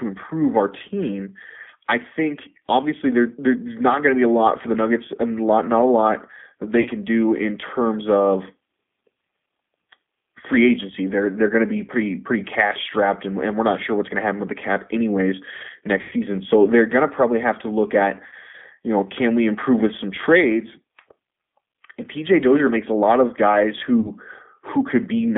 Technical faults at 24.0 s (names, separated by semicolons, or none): G.729 codec; VoIP packet loss concealed by the speech codec